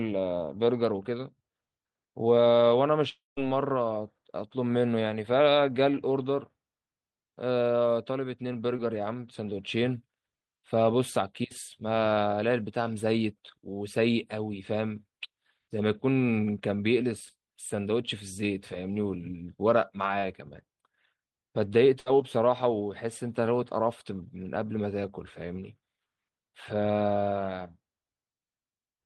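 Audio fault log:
3.09–3.39 s, long network dropout: The last sound carries on as a fading buzz or hiss, then about 0.18 s of silence. Roughly 280 ms is likely lost in a network dropout.
8.77–8.80 s, short concealed packet loss: About 20 ms never arrived. The receiver patched it by extending the previous sound, leaving a brief smear before real audio returns.
22.00–22.08 s, burst of packet loss: About 60 ms went missing in a row. The last sound is held and turned down, then the audio resumes with that part gone.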